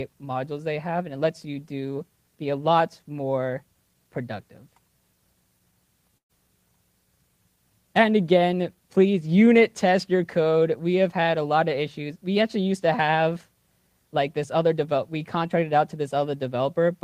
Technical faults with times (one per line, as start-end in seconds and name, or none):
6.17-6.31 burst of packet loss